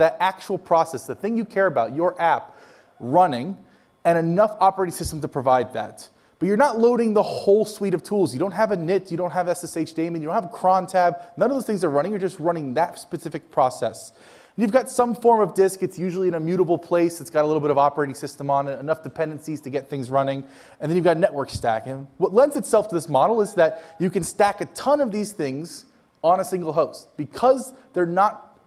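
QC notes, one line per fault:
Nothing stood out on listening.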